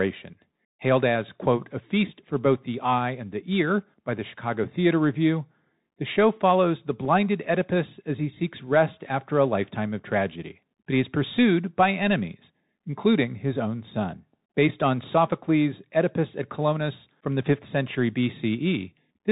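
Speech carried through a Bluetooth CVSD headset codec, whose one-bit delta coding leaves nothing above 4 kHz, scratchy sibilants and granular hiss, consistent with a 64 kbps CVSD link; a spectrogram shows a hard ceiling at 4 kHz. At 7.05 s, just after "the show follows the", unconcealed Bluetooth headset packet loss drops about 3.8 ms, likely a single lost packet, leaving a gap with abrupt edges, a brief flat stretch in the waveform and a thin vertical stripe on the spectrogram.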